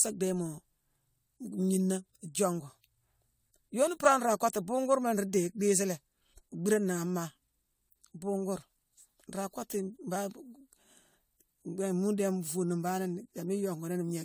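Generation loss runs throughout. The speech sounds swirly and hollow, with blurred attacks, likely from about seven rounds of AAC-style re-encoding near 96 kbit/s.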